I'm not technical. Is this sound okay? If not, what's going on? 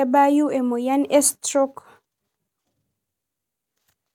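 Yes, it sounds fine.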